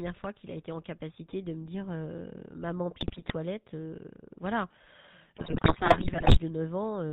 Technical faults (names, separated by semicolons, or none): GSM full-rate codec; GSM bit errors